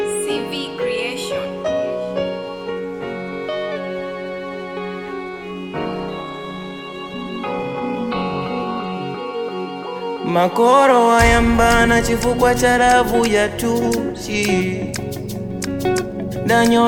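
A call bitrate drop runs from 5.77 s to 9.07 s. The link's bandwidth estimate collapsed, and the encoder was pushed to spend far fewer bits. The coarser coding sounds like a fall from around 96 kbps to about 15 kbps, holding at its worst for roughly 3.2 s. The top end is shaved off, so the sound turns muffled and watery, with a rough, smeared texture, until the rate climbs back.

Wi-Fi interference begins at 12.75 s and continues to the end of the clip. A nearby Wi-Fi radio's transmissions leak into the audio circuitry, where they are rectified into audible clicks. The result is a regular ticking about ten times a second, following a 102.4 ms beacon interval. It sits low, roughly 45 dB below the main sound, but it is steady.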